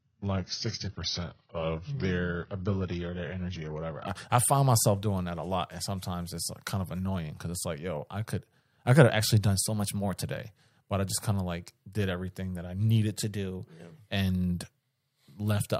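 From 0 to 4.07 s the adaptive stream starts at a low bitrate. Nothing sounds above 6.6 kHz, which fits roughly 16 kbit/s AAC, until quality jumps without a gap just before "I I find myself". Within that, from 0.87 to 2.05 s, the sound slows 6.16% and drops about 110 cents, then snaps back. The same happens after "could have actually done" (9.64 to 10.24 s) and after "everything that I needed" (13.23 to 14.03 s), where it speeds up 6.16% and rises about 103 cents. These are likely drift correction steps. Unlike the bitrate switch, speed and pitch shift together and return.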